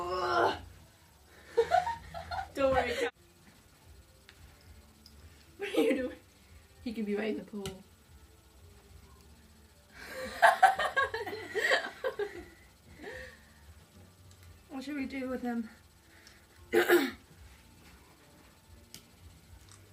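No technical faults can be heard anywhere in the recording.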